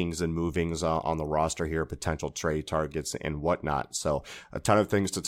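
No technical faults are audible anywhere in this speech recording.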